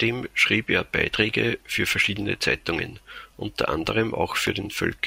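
Nothing technical jumps out here; no dropouts, clicks, glitches or other faults turn up anywhere along the way.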